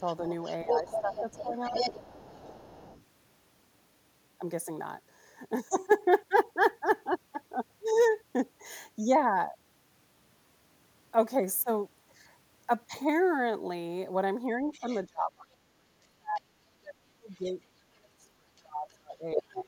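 A second voice runs under the talker from the start to 3.04 s, only about 5 dB below the main speech. This is the other side's voice leaking through, likely because the echo canceller left part of the loudspeaker playback in the microphone signal. Within that stretch, from 0.64 to 1.8 s, the talker's own voice sags by as much as roughly 15 dB, about a second in all. This is speech suppressed in double talk: with both sides active, the canceller likely could not tell its talker from the echo and turned everything down.

From 14.58 s to the end, the same suppression returns much harder. The talker dips by up to around 30 dB and is affected for roughly four seconds in total. Meanwhile scraps of the far side leak through at 14.72–15.01 s, faintly at about 25 dB down. A brief trace follows at 16.36–16.4 s, about 35 dB down, and another at 17.33–17.51 s, about 30 dB down. At 19.33–19.62 s the leak rises to roughly the talker's level.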